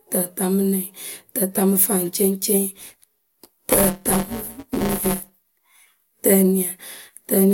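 Speech clip with buffer tearing from about 2.78 to 5.43 s: a steady robotic buzz near 172 Hz rides on the voice, which fits a 256-sample buffer. The writer and reader have slipped, so roughly a sixth of each buffer replays audio about 10 ms stale, with hard joins either side.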